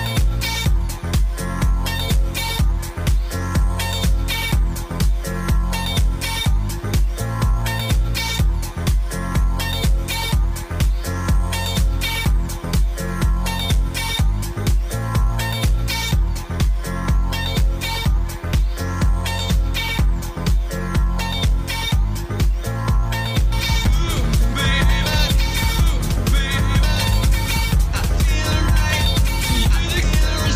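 From 23.52 s to the end, a doubled audio track appears: a second, full-band copy around 5 dB quieter trails about two seconds behind, likely from a slower capture path. It cuts in abruptly, dry and undecayed, and the waveform and spectrogram show each event repeated two seconds later.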